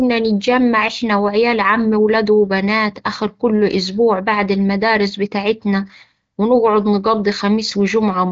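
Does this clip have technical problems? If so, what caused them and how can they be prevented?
No, the speech is carried by the AMR wideband (HD Voice) codec at 15.85 kbit/s, a rate where that codec stays clear, with nothing above 7.6 kHz, which is what this path normally delivers, so there is nothing here to prevent.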